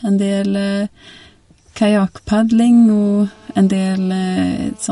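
Throughout this speech clip the treble stops dead at 11.2 kHz, and the top end sounds watery and swirly, with metallic chirps on s sounds. That points to likely MP3 compression at a low bitrate around 48 kbps. A simple low-pass filter would dull the sound without the shifting, frame-to-frame swirl. From 2.73 to 4.87 s a steady, hard, raspy buzz sits at 217 Hz, about 32 dB below the speech. This is GSM phone buzz from a nearby 2G phone on a call, whose radio bursts are rectified into the audio. Unlike mains hum at 50 or 60 Hz, it has a sharp, harmonic-rich rasp at 217 Hz.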